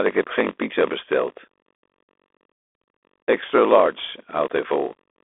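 Block size mismatch (padded) runs from start to end. Each 1024-sample read is only partly filled, and the remainder is zeros. The result is a steady 46.9 Hz buzz, which fits a 48 kHz stream, and the audio plays at 0.938 times normal speed with pitch essentially unchanged.

Bluetooth CVSD headset codec damage is also present throughout. The one-bit up-or-down encoder, whose adapting step cannot keep pace with fast loud detail, leaves a granular hiss under the speech and scratchy s sounds. Nothing passes above about 3.8 kHz, which gives the narrow headset-line character.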